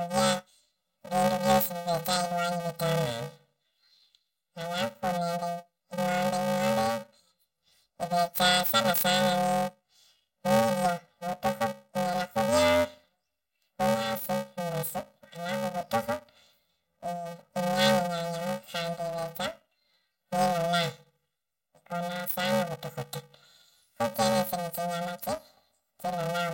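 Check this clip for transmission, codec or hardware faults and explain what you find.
One fault runs through the whole speech clip: planar audio read as interleaved. Blocks of about 2.9 ms, which fits 128-sample blocks, each replay double speed, left then right, giving a robotic 345 Hz buzz with no octave shift as a pitch fault would give.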